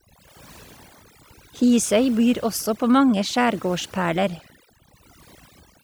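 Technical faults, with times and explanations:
Throughout, overdone noise removal: the noise reduction was pushed too hard on a noisy recording, so individual frequency bands near the estimated noise level are pulled far down or muted, and the quieter parts of the speech vanish with them. Pauses fall to near silence scattered with twinkling specks. A spectrogram shows a blank floor dotted with isolated bright blips, plus ragged gaps eaten into the speech harmonics.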